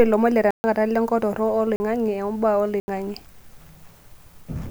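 Three times in this speech clip the output buffer was likely left unfilled, producing a block of digital silence at 0.51 to 0.64 s (about 134 ms), 1.76 to 1.80 s (40 ms) and 2.80 to 2.88 s (80 ms). The speech drops abruptly to silence and returns with no fade. All three gaps, at 40 ms, 80 ms and 134 ms, are long enough to be heard as holes in the speech.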